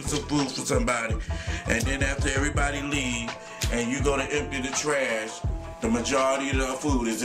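No technical faults are audible.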